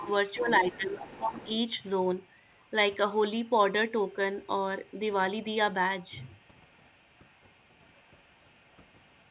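From 0.0 to 1.47 s a second talker sits about 15 dB under the speech. This is other side's voice leaking through, likely residual loudspeaker echo the echo canceller failed to remove. Fainter scraps, about 35 to 40 dB down, recur at 2.18–2.71, 3.45–3.50, 4.07–4.13, 4.41–4.48 and 4.86–4.99 s, then persist from 6.23 s to the end.

Overlapping that first leak, from 0.36 to 1.5 s, the main speech dips by up to about 15 dB across roughly a second. This is speech suppressed in double talk: with both sides active, the canceller likely attenuated its own talker along with the echo. Throughout, the band stops at 4 kHz, consistent with a G.711 narrowband call path.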